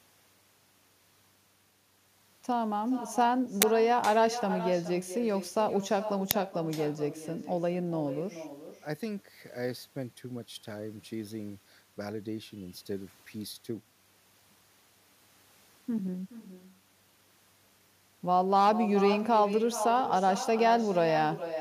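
From the start, every phrase is trailed by a fainter, hollow copy. This is echo with no canceller. The far end's loudspeaker feeds its microphone, and nothing removes it. The copy returns around four tenths of a second late, about 12 dB down.

At 3.62 s a sharp, loud crackle of digital noise cuts in for about 11 ms. Another, shorter one hits at 6.31 s, lasting under 3 ms. Both are uninitialised buffers, played out before audio filled them. Their lengths fit 512-sample and 128-sample blocks.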